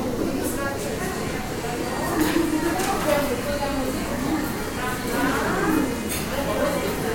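Nothing in these everyday sounds trips any alarm, since no technical fault turns up anywhere in the recording.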